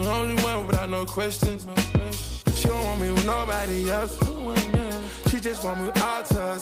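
Nothing in this recording stood out as a problem on listening.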